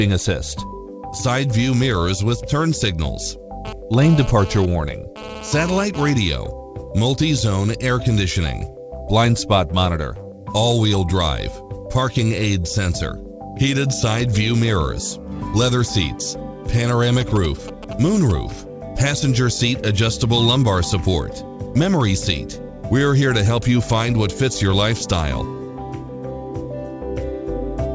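From 3.65 to 6.10 s a GSM phone buzz sits about 12 dB below the sound: a nearby 2G handset moving data pulses its transmitter 217 times a second, and the audio circuitry rectifies those pulses. Unlike mains hum, it is harsh and raspy, dense with harmonics, and comes and goes.

From 17.21 to 18.32 s come GSM signalling bursts, roughly 10 dB down. Here the phone sends only brief groups of pulses, so instead of a continuous rasp there is a galloping dit-dit-dit of short 217 Hz buzzes, heard through a call path that carries nothing above 8 kHz.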